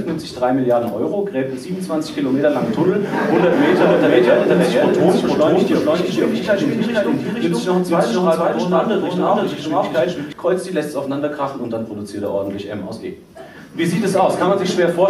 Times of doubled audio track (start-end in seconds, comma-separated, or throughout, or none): 3.52-10.32